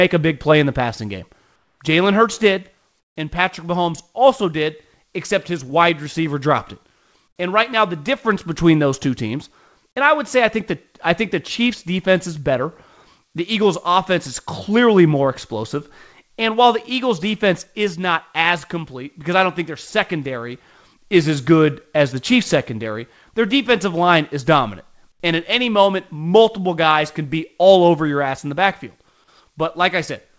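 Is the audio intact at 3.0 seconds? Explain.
No. From 3.00 to 3.16 s the real background drops out and is replaced by comfort noise: a flat, featureless hiss about 16 dB quieter. This is likely discontinuous transmission. The sender paused during silence, and the receiver filled the 160 ms gap with synthetic noise.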